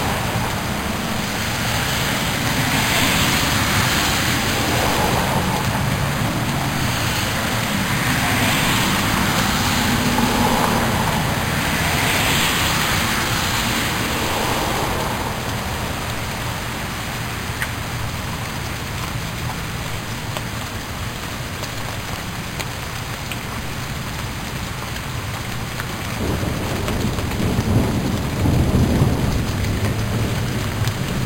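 Throughout the clip, the audio was upsampled by simply repeating each sample with no smoothing filter, which fits an original rate near 11 kHz. This imaging from sample-and-hold upsampling leaves mirrored spectrum copies, the lowest spanning 5.5 to 11 kHz at about −12 dB, heard as a bright metallic fizz tracking the sound.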